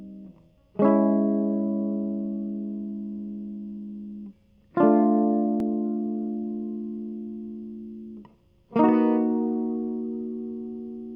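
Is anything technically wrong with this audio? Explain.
No, nothing technically wrong can be heard in this music; the signal stays stable and intact throughout, with no audible faults.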